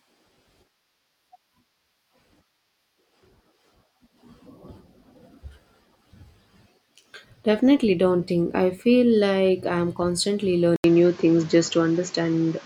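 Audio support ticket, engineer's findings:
Input switched to a poorer device at 10.76 s, right after "feel like I'm constantly". 80 ms dropout, then duller sound topping out at 7.6 kHz, level shifted about 5 dB, new background noise about 30 dB below signal. Likely a mic swap.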